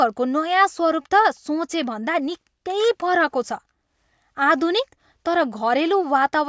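Listening to the speech in the clip, nothing technical stood out at any point.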